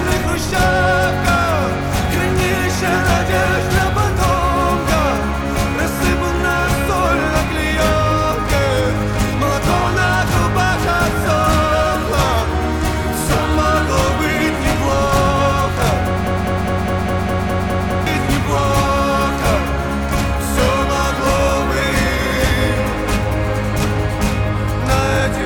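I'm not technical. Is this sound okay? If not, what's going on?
No. From 16.27 to 18.07 s there is a broken-record loop: the same 0.2-second snippet plays nine times in a row, identically, likely from a stalled player or stream. Unlike an echo, nothing fades, and the sound meant for that gap is lost.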